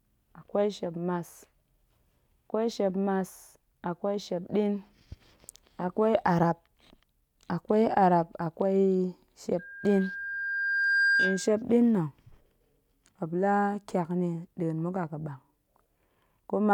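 Loudspeaker feedback squeal from 9.59 to 11.63 s: the microphone picks up the loudspeaker it feeds, and at 1.6 kHz the loop gain exceeds one. A steady tone swells over roughly a second and a half until it sits about 5 dB above the speech.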